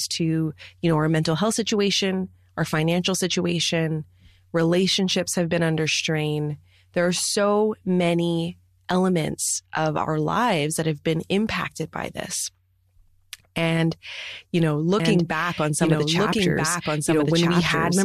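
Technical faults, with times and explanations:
15.00–18.04 s, doubled audio track: after "you know", a full-band copy of the speech enters abruptly about 1.5 s behind at roughly equal level and lasts to the end, likely from a second, slower capture path. The spectrogram repeats the pattern shifted, undecayed; the waveform thickens suddenly.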